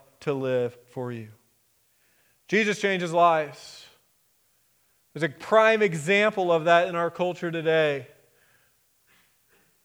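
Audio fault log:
6.85 s, dropped samples: a single sharp click cuts through the speech at this point, most likely because roughly one sample went missing from the stream. With that value skipped, the waveform steps abruptly from one level to a later one instead of moving smoothly. That tiny discontinuity is far too brief to remove any sound, but it registers as a click. On a spectrogram it shows as one thin vertical line spanning the frequency range.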